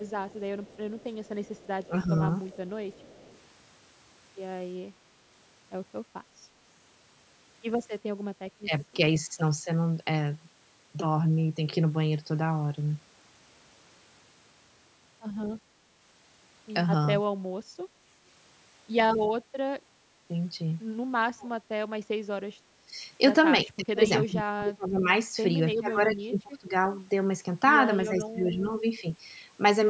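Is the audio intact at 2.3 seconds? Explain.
No. An echo leak runs from 0 to 3.39 s. A very faint copy of the speech returns 342 ms late, likely from incomplete echo cancellation.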